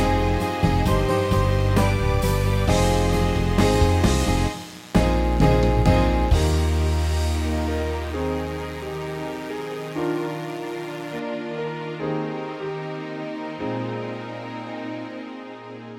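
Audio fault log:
0.0 to 11.19 s, mains buzz: a steady, raspy buzz sits about 25 dB below the programme and then stops at 11.19 s. Sharp switching spikes, of the kind a dimmer, rectifier or unshielded run lets in, arrive twice per cycle of the 60 Hz supply. Because each spike is so brief, its energy spreads into a long ladder of 60 Hz harmonics reaching several kHz, which turns a low hum into a gritty, edged buzz.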